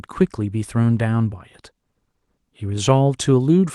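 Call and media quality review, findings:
No call or media quality findings in this speech clip.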